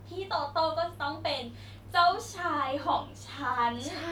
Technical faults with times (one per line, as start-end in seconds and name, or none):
1.70-1.78 loose connector crackle